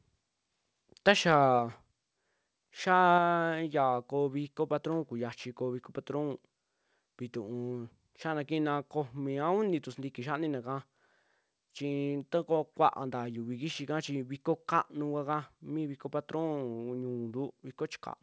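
From 1.08 to 1.35 s the loudest syllables take on a harsh, crackling edge. On the waveform the tallest peaks run flat, cut off at the converter's limit and pushed about 2 dB past it, though only a small share of samples is affected. The spectrogram shows vertical smears of broadband energy at those peaks. The likely cause is microphone overload: the input level was set too high, so the converter sliced off the tops of the waveform.

At 3.18 s the sound drops abruptly by about 4 dB, and the background falls with it in a single step rather than a fade. The waveform envelope shrinks at that instant, and the spectrogram darkens evenly across the band, which stops at 8 kHz as expected for a wideband call codec. This is a microphone volume stepped down event, likely the call software cutting the device gain after the clipped peaks shortly before.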